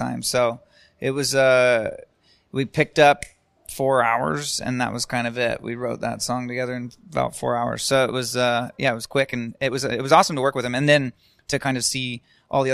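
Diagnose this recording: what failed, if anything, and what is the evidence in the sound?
From 8.64 s, after "it was", the speech runs 1.35 times faster, rushed at unchanged pitch. That's a time-stretched section, likely software-squeezed before storage.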